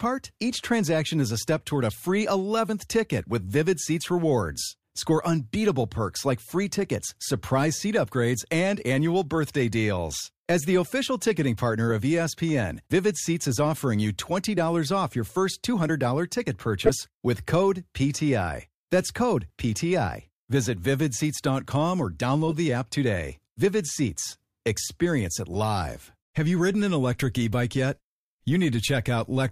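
Corrupt frames decoded appear at 8.06 s, 11.9 s (after "the official ticketing partner"), 16.86 to 16.90 s (before "with code"), 22.48 to 22.53 s (before "the app today") and 25.54 s. Each spans two or three damaged frames that the decoder played anyway. Flipped bits misplace spectral energy, producing brief chirps and blips. The one before "with code" is loudest, at about -10 dBFS.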